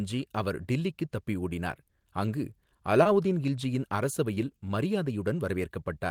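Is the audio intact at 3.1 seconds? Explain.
No. There is a short concealed packet loss from 3.03 to 3.07 s, just after "டில்லிக்குத் தப்பி ஓடினார் அங்கு". About 20 ms of the stream arrived too late for the decoder. The receiver covered the hole with roughly 18 ms of synthetic sound, extending what came before. It then crossfaded back into the real signal. The result is a brief smear or wobble, and a short consonant there may be lost.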